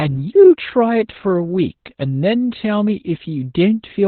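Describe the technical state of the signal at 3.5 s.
At 3.5 s, as throughout, the speech carries Opus voice compression. The SILK predictive coder has removed everything above 4.3 kHz and coded the excitation coarsely, leaving it muffled, hoarse and faintly robotic, consistent with roughly 8 kbps. A plain low-pass filter would dull the sound without that grainy roughness.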